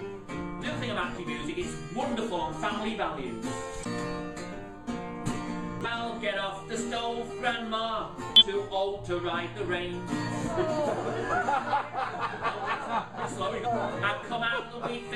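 You get five short bursts of damaged data in a compressed stream here, at about 1.12, 3.81, 5.81, 8.36 and 13.61 s, each lasting roughly 54 to 67 ms. Each one is a quick glitch breaking into the audio. What's going on is that corrupted bytes land in the encoded frames, the decoder can't make sense of them, loses its place and has to hunt for the next valid frame header before clean sound comes back.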